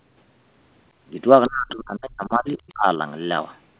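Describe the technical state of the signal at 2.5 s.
At 2.5 s the speech dips by up to roughly 30 dB (1.48–3.0 s), likely speech suppressed in double talk: the echo canceller turning down overlapping speech.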